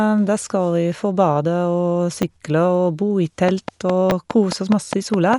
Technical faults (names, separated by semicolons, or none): Dolby Digital compression; repeated buffer; train of clicks